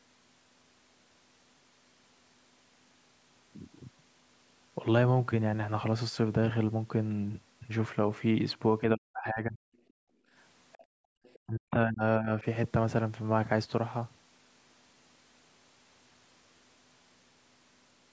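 Speech suppressed in double talk, from 8.95 to 9.6 s: the voice sinks by roughly 40 dB. The likely cause is that both ends were talking at once, and the echo canceller could not separate the near talker from the loudspeaker echo, so it turned everything down. Similar drops follow from 11.44 to 12.03 s, roughly 30 dB deep, and briefly from 12.19 to 12.31 s, a shallower dip of roughly 10 dB.

Background gated by the echo canceller, from 9.88 to 10.33 s and again from 10.85 to 11.16 s: the room sound falls away by about 33 dB and then about 35 dB, leaving a dead, empty gap before the ambience returns. Here the canceller clamped the microphone hard while the loudspeaker was active.

The other side's voice leaking through, from 10.73 to 10.85 s and from 11.23 to 11.39 s: faint fragments of a second voice sit roughly 30 dB below the main speech. These are likely residual loudspeaker echo that the canceller failed to subtract fully from the microphone signal, so short scraps of the far end slip into the recording.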